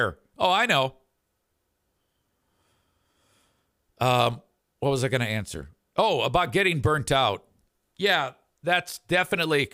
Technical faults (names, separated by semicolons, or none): none